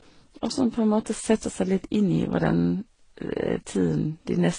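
From start to finish the speech carries layered compression damage, most likely from transcoding between lossy codecs, with the audio passing through a low-rate HE-AAC-style stage and later AAC and Vorbis-like encodes. Nothing survives above 9.9 kHz, the lowest cut-off in the chain. A single low-bitrate encode would leave one consistent artefact texture. Here, the artefacts of the different codecs sit together, each stage re-encoding the previous one's errors.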